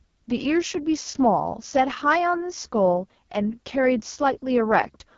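From start to end, the speech carries heavy AMR wideband (HD Voice) codec damage. The coder models the voice as pulses driving a vocal tract filter. Only sound below 6.4 kHz is actually coded. The band from 6.4 to 7 kHz is filled with shaped noise, and nothing lies above 7.2 kHz. The damage is severe. The voice sounds rough and raspy, with a gritty edge. That points to the lowest mode, around 6.6 kbit/s.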